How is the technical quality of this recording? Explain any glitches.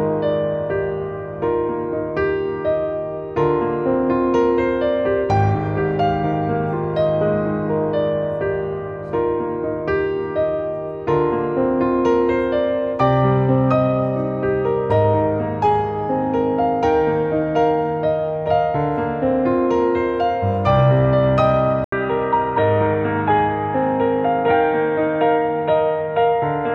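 The recording has one clear glitch near the end. At 21.84 s, after a gap of about 80 ms, the sound turns dull and boxy and stays that way to the end: nothing above 4 kHz survives, a faint new background hiss sits far below the signal, and the loudness barely changes. The likely cause is an input switched to a poorer device, where the system hands recording over mid-take to a narrower-band microphone or headset profile with its own tone and noise.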